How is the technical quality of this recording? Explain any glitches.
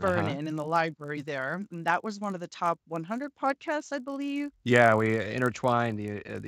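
The recording is marred by one persistent fault. A resampler restarted on every block runs through the whole clip. Each 20 ms block was converted on its own, which fits a 16 kHz to 48 kHz conversion, so at every block edge the converter lacked the real neighbouring samples and left a small error. With blocks this short, those errors repeat at 50 Hz and merge into a low buzz that rides under the sound and falls silent whenever the signal stops.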